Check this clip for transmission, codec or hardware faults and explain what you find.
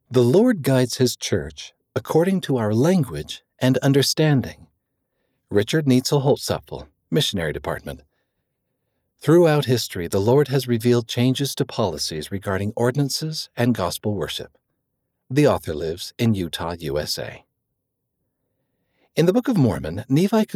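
No faults found in this recording.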